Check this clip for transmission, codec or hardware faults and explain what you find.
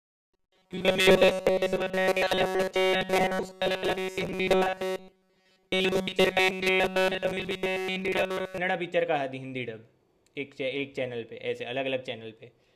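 One fault is present. From 0.01 to 8.58 s, audio likely arrived too seldom, so playback kept repeating a short buffer, which fits about 5.3 ms, for roughly 70% of the time. This robotic sound from repeated short buffers locks the speech into a rigid, metallic 188 Hz buzz that only loosely follows the words.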